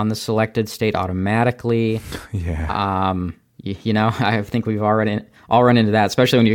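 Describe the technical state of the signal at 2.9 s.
At 2.9 s the speech signal is intact, with no dropout, clipping, glitch or other technical fault at that point.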